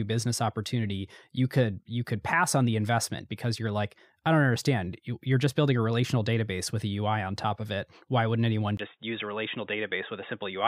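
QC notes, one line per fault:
8.77–10.67 s, input switched to a poorer device: after a 20 ms gap the speech turns dull and boxy, with nothing above 3.8 kHz and faint new background noise but no real level change, likely from recording moving to a narrower-band microphone or headset call profile.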